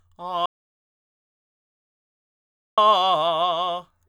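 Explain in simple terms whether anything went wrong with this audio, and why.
Something did go wrong. There's an audio dropout to silence from about 0.46 s to 2.78 s. The music cuts off abruptly, leaves roughly 2.3 seconds of dead, total silence with no background hiss at all, then jumps straight back in. The recording was most likely still running while its input was briefly lost, perhaps a loose connection or an accidental mute, so it just wrote nothing. Whatever played during that gap is gone for good.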